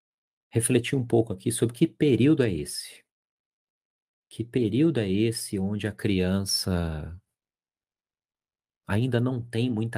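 Listening to this speech recording, nothing stood out as a technical problem at any point.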